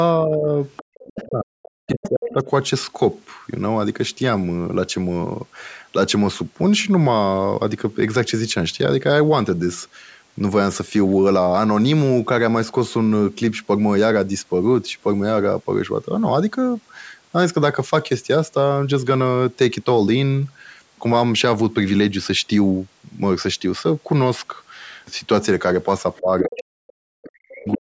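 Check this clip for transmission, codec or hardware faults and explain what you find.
Three related faults from a hands-free call cluster at the very start and the very end of the clip. All of them likely come from echo cancellation struggling with the far end's sound on the loudspeaker. The call's microphone path is working as expected, with nothing above 8 kHz.

Speech suppressed in double talk happens from 0.2 to 2.47 s and again from 26.21 s to the end at 27.81 s. The talker's speech sinks, thins and breaks into pieces, falling by about 40 dB at its deepest. The first stretch loses roughly one and a half seconds, the second about one second. The likely cause is the echo canceller failing to tell the local talker apart from loudspeaker echo during overlapping speech and clamping down on both.

The other side's voice leaking through can be heard at 0.76–1.27 s, 1.87–2.34 s, 26.16–26.63 s and 27.23–27.77 s. 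Each time a second voice slips in under the talker. It is strongest in the 1.87 s burst, about 10 dB below the speech, and faintest near the end, about 25 dB down. The likely cause is far-end audio from the loudspeaker reaching the microphone and surviving cancellation.

Background gated by the echo canceller occurs once, as a 40 ms hole from 0.9 to 0.94 s. The room sound drops by about 40 dB and then springs back. During loudspeaker playback the canceller briefly muted the microphone hard and released it almost at once, so the ambience is gone for only an instant.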